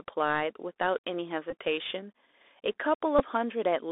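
From start to finish the speech sounds narrow and boxed in, with a fine granular hiss beneath it, s sounds turned scratchy, and louder high-pitched moments smearing into distortion. Nothing below about 300 Hz or above 3.6 kHz comes through. This is the Bluetooth CVSD headset codec. It sends one bit per sample saying whether the waveform should step up or down. Its adaptive step size cannot keep pace with fast, loud movement, and the constant stepping leaves that hiss. The character fits a 64 kbps headset link.

At 1.50 to 1.52 s a short buzz appears. A second, briefer buzz follows at 3.19 to 3.21 s. Both are Bluetooth headset packet repeats. Voice packets between headset and phone went missing, and the chip decoded the last good packet again in their place, about 18.8 ms in the first gap and 11.2 ms in the second. That fits roughly five and three lost packets. Each repeat lasts 3.75 ms, so the run of copies makes a tone near 267 Hz until good packets return.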